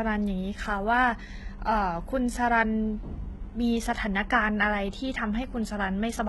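Across the whole speech clip the top end sounds false: s sounds come out gritty and lispy, with a metallic sheen, and nothing at all reaches above 11.8 kHz. This is heavy damage from HE-AAC compression, likely at a low bitrate that fits around 16 kbps. Only the lower spectrum is truly coded; the treble is rebuilt by copying lower bands upward under a coarse envelope, so the upper harmonics no longer match the real sound.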